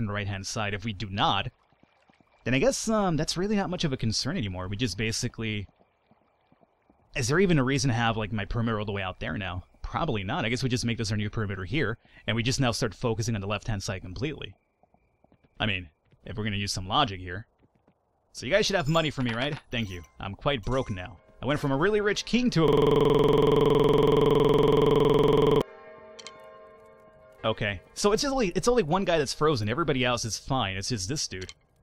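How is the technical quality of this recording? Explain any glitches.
There's one real glitch. From 22.68 to 25.62 s you get a system hang loop. The machine froze while the audio hardware kept cycling the same 46 ms chunk, which fits a 2048-sample buffer. That chunk repeats around sixty times and makes a gritty stutter-buzz at 21.5 Hz.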